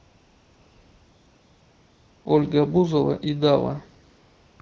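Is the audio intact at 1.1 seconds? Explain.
No. At 1.1 s the clip is inside a stretch of AMR comfort noise running from 0.00 to 2.25 s. The sending side treated this opening as silence and stopped transmitting speech frames, so the receiver filled the gap with synthetic noise built from a rough estimate of the background's level and spectral shape. It sounds like a smooth, unvarying hiss in place of the real ambience. On a spectrogram it shows as a flat, featureless wash; on a waveform, as a uniform low-level band.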